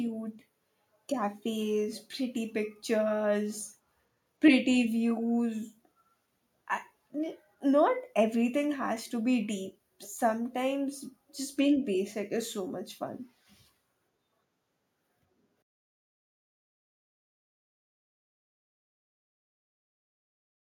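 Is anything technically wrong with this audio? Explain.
No, nothing is technically wrong with this audio.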